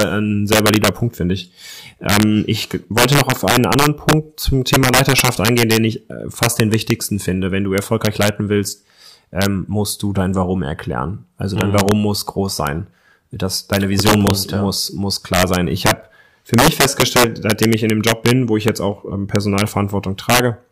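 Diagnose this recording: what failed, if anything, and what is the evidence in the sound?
Integer overflow runs through the whole speech recording: loud peaks produce violent cracks far harsher than clipping. The signal was driven about 8 dB past full scale in integer arithmetic, likely at a gain or sample-format conversion stage. Under one percent of samples wrapped to the opposite extreme instead of being limited.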